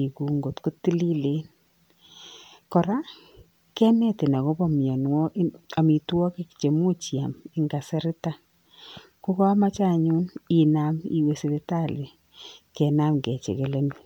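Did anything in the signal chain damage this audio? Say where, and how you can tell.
No, nothing in this speech recording stood out on listening as damage from any stage of the signal chain.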